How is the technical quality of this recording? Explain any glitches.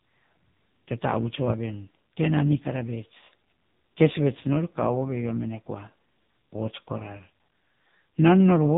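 The technical quality is poor. The speech runs through the AMR narrowband mobile codec from start to finish. Nothing above about 3.8 kHz survives, so the voice sounds thin and boxed in. The codec rebuilds speech from a vocal-tract model excited by a few pulses per short block. At this heavy damage level the result is buzzy and synthetic. That points to a very low bitrate, around 5.9 kbps.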